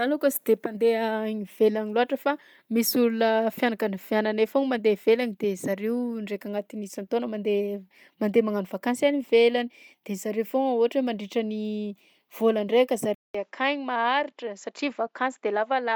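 Speech throughout carries a grainy, breathy edge on sibilants and upper harmonics, even though content extends to about 20.1 kHz. That texture is plainly audible and points to Bluetooth LC3 compression as the likely cause. At low bitrates the codec discards parts of the upper spectrum in each frame and substitutes shaped noise, and this character fits roughly 48 kbps with 10 ms frames. From 13.15 s to the end of the clip the input switched to a poorer device. A gap of about 200 ms of silence marks the change. After it, nothing is heard above 7.6 kHz, so the speech turns duller and boxier. The level falls by roughly 5 dB, and a new noise floor appears somewhere around 55 dB below the signal, with its own tonal colour. This matches the system handing capture to a narrower-band microphone or headset path partway through recording.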